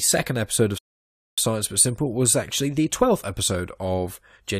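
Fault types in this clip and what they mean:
Rebuffering stall: the speech cuts to silence at 0.78 s and picks up at 1.38 s exactly where it stopped, with nothing missing but about 0.6 s added, because playback used up its downloaded audio and waited for more.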